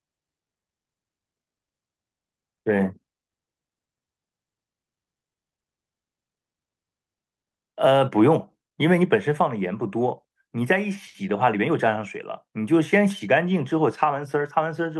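Nothing is technically wrong with this speech clip, which comes through a call path working as expected.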